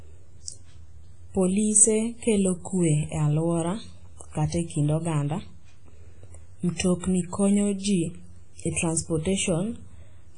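From start to finish the speech carries heavy WMA-style compression damage: a ringing, washy quality with hiss that swells and fades with the signal, and no content above 10.1 kHz. The likely cause is a low-bitrate Windows Media Audio encode, consistent with roughly 24 kbps, where weak spectral lines are discarded and quantisation noise smears across long transform blocks.

From 6.75 to 6.80 s, about 44 ms of pre-echo precedes a sharp attack: a brief hiss arrives before the onset, which itself sounds softened. The codec spread noise scaled for the loud transient evenly across its block, so it also filled the quiet gap leading into it.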